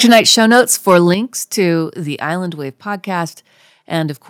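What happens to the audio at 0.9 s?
At 0.9 s the speech still carries a harsh, crackling edge on its loudest syllables, near the end of a stretch of microphone overload running from 0.04 to 0.98 s. The cause is likely an input level set too high, driving peaks about 6 dB past what the converter can represent. Those peak tops are sliced flat, affecting around 3 percent of samples, and the squared-off waveform adds the gritty distortion heard on each strong syllable.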